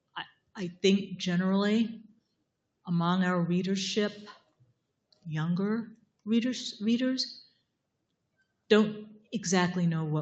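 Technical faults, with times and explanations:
Throughout, noise suppressor applied to music or sounds: a speech-oriented suppression stage stayed active on non-speech material, so it misreads sustained tones, ambience and reverberant tails as background noise and pulls them down while sharp attacks pass largely intact. The level swings by roughly 10 dB as sounds begin and decay, giving a pumping, fluttering, thinned-out character. Nothing is heard above 8 kHz, which fits a wideband Opus call link.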